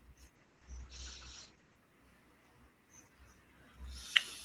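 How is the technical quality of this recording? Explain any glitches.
The recording has one clear glitch, a call bitrate drop early on. From 0.36 to 1.83 s the call's bandwidth estimate collapsed and the Opus encoder was starved of bits, the coarseness fitting a fall from around 32 to 11 kbps. The speech turns rough and watery, and the top end is cut off at 8 kHz, sounding muffled for about 1.4 s before the bitrate recovers.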